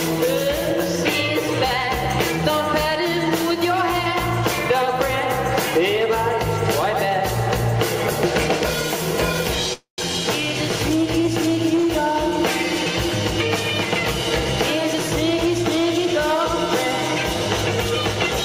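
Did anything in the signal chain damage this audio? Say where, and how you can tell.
Yes. Call audio freeze, 9.73 to 10.00 s, likely a network stall draining the jitter buffer. A fading fill, then sound resumes intact, 246 ms late.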